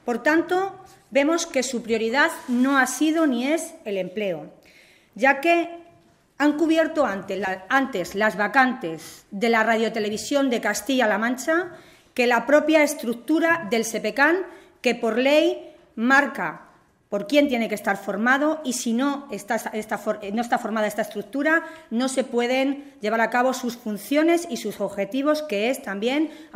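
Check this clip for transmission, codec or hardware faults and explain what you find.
One transmission fault: DAB burbling from 7.45 to 7.52 s. Bit errors at roughly 0.1% slipped past error correction into MP2 data, causing sub-band blips, unlike a dropout's silent gap.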